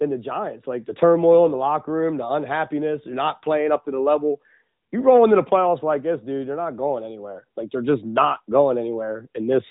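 Throughout the speech, the AMR narrowband mobile codec is plainly audible. Nothing reaches above 4 kHz, and the voice has the synthetic, pulse-built texture of a vocal tract model, which fits a mid-rate mode near 10.2 kbps. A simple low-pass filter would dull the top without adding this texture.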